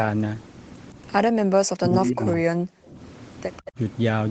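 Speech recorded over a call, with the talker turned down between 1.79 and 2.4 s by up to about 30 dB for around half a second in pieces. This is speech suppressed in double talk, likely from the echo canceller ducking both sides, and unlike a network dropout the level dips and recovers rather than going silent. Echo leak appears at 2.32–2.37 s and 3.56–3.72 s as a faint copy trailing by 161 ms, about 25 and 20 dB below the talker, a distinct delayed repeat rather than a smeared reverberant tail.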